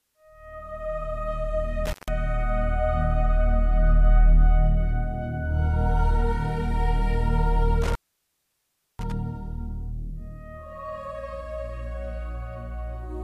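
At 1.86 to 2.09 s, then 7.82 to 9.12 s, an intermittent contact briefly opens the line. Sound drops out for 147 ms, then about 1.04 s, crackling at each edge over faint hiss.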